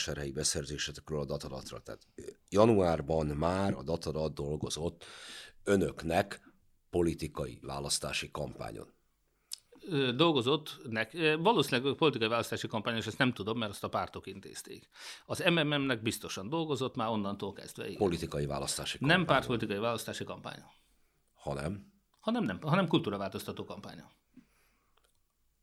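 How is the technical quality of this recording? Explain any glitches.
No glitches or technical faults turn up anywhere in the speech recording.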